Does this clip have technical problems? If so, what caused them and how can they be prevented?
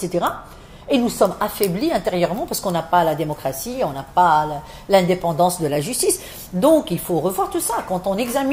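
Yes. From 1.31 s to the end, pre-emphasis is left on. The treble sits about 8 dB high at 10 kHz, matching the CD 50/15 µs boost with no de-emphasis applied. The sound turns thin, bright and sibilant. Prevent it by applying matching de-emphasis on playback.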